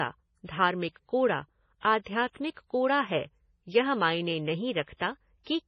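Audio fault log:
throughout, MP3 compression: heavy damage, with nothing above 9.5 kHz and a watery, swirly texture on the speech as weak frequency lines drop in and out between frames. The likely cause is an MP3 encode starved of bits, which fits roughly 24 kbps.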